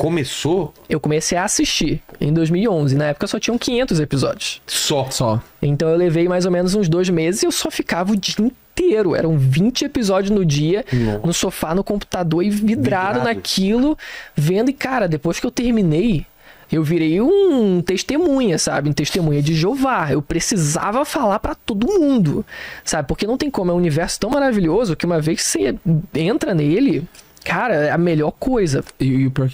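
At 24.32 to 24.34 s, chunks out of order: a 10 ms chunk plays one chunk late, giving a brief jumbled moment with three hard joins, seen as thin vertical spectrogram lines and waveform steps.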